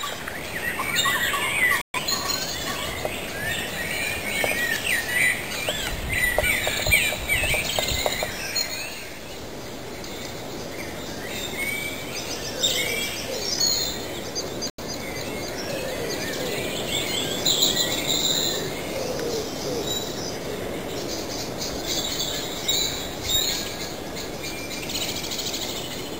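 At 1.81 s the audio mutes and stays silent until 2.00 s, then again from 14.70 to 14.84 s. Both gaps are digital broadcast dropouts. The receiver stopped getting valid frames and muted until clean ones arrived. The first hole loses about 128 ms, consistent with three frames failing. The second loses about 85 ms, roughly two frames. Each sounds like a cut or quick fade to silence, with the material resuming further along rather than where it stopped.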